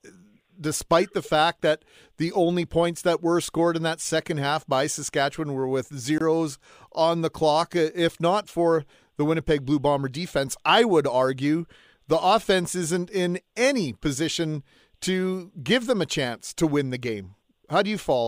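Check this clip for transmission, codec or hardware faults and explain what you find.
One fault stands out: a block of digital silence from 6.18 to 6.21 s. The speech drops abruptly to silence for about 23 ms and returns just as abruptly, so the whole event reads as a brief hole. The cut has no fade, meaning stretch of output samples was simply left as zeros. The length fits a 1024-sample buffer that the program failed to fill in time.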